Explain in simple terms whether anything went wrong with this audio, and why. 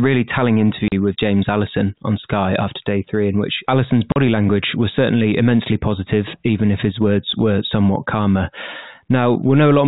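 Yes, something went wrong. The speech cuts out twice, at 0.88 s and 4.12 s, just before "language was certainly immensely". This is packet loss filled with silence. Each gap lasts 40 ms, which fits two lost packets. The gaps have hard edges.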